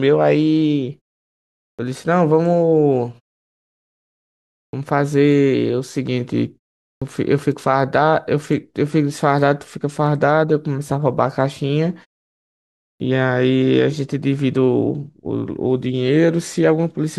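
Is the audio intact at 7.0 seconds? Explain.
No. At 6.98 s the sound resumes after a pause of about 0.47 s with its onset missing, a clipped start after a pause lasting until 7.02 s, so roughly 37 ms of the opening is lost. The output path appears to have gone idle during the silence and had not fully woken when the sound returned, so it starts abruptly. Unlike muted pauses, which only drop background noise in gaps, here actual sound is cut.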